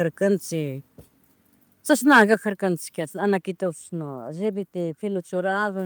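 It's a short speech recording with two faults close together. From 2.11 to 2.22 s there's a harsh, crackly edge on the loudest stretch, likely microphone overload: peaks pushing about 5 dB past the converter's limit, with roughly 7 percent of samples flattened. Then at 2.34 s voice and background both drop abruptly by about 5 dB, likely the microphone volume being stepped down by the call software reacting to that clipping.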